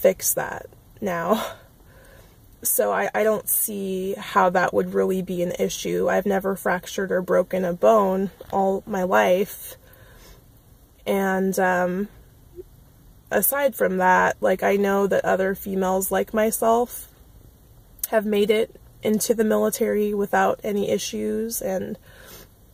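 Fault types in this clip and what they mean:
No technical faults are audible in this clip.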